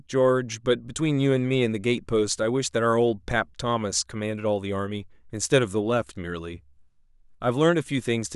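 Nothing in the speech stood out as a technical fault on listening.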